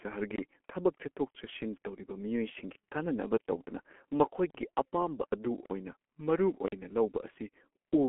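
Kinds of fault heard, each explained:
G.723.1 codec: a low-rate telephony coder, here around 6.3 kbit/s, whose slowly updated voice model leaves this speech muffled and hoarse with smeared consonants; a spectrogram shows a band of roughly 250 Hz to 3.4 kHz, empty above 3.7 kHz.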